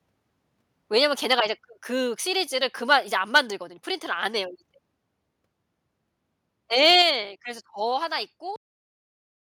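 Microphone overload at 6.83 to 7.02 s brings a harsh, crackling edge to the loudest part of the speech, with peaks pushing about 2 dB past the converter's limit and a small share of samples flattened. The likely cause is an input volume set too high for the converter.

Microphone volume stepped down at 7.02 s, right after that distorted stretch: speech and background fall together by about 5 dB in a single abrupt step. This fits call software likely reacting to the clipping by lowering the device's input volume.

Cut-off end at 8.56 s: the audio stops mid-sound and drops straight to digital silence, with no natural decay. The final buffers were never written or played out, so the recording ends abruptly instead of trailing off.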